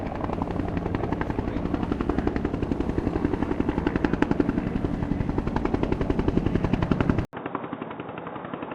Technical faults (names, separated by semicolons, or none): input switched to a poorer device